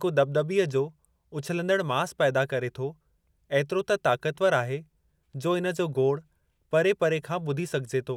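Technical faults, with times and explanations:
Nothing stood out on listening to this speech recording.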